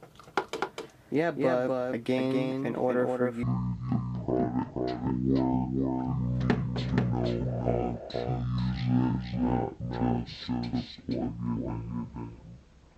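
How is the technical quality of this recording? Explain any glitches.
The quality is poor, with two faults stacked on top of each other.

A doubled audio track runs through the whole recording. A second, full-band copy of the sound trails the original by roughly a third of a second, at about 5 dB below it. It is likely captured again through a slower path or left in by an edit that kept two copies out of step. The echo sounds dry and separate, with no decay or room colour, like a flat slapback rather than reverberation.

A section at the wrong speed begins at 3.43 s and lasts until the end. From that point the audio plays at 0.519 times its recorded speed, likely because it was fitted to the wrong clock during editing or playback. Speed and pitch drop together at once, leaving everything slightly over half as fast and around ten semitones lower, so the sound turns deep, slow and dragging.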